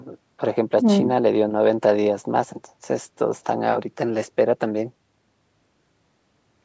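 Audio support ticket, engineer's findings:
Nothing stood out on listening to this speech recording, which shows only the expected call microphone processing with content topping out around 8 kHz.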